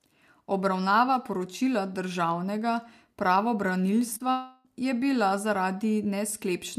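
Just after 4.1 s the speech hits short concealed packet loss twice, overlapping: one stretch from 4.13 to 4.26 s with about 26 ms patched in, and a second from 4.18 to 4.22 s with about 18 ms patched in. Each time roughly 20 ms of audio didn't make it to the decoder in time, so the receiver stretched out the previous sound to cover the gap and then eased back into the real signal. It comes across as a quick smeared wobble.

Right after that, from 4.31 to 4.67 s, there's a long network dropout. About 340 ms of audio never turned up, and the receiver carried on synthesising the last sound for nearly all of it, around 333 ms of continuation with no real silence. So you hear a drawn-out buzz or hiss that fades instead of speech, and then the audio picks up again at "je bila". Whatever was said in that window is simply gone. The likely cause is a network stall rather than anything at the source.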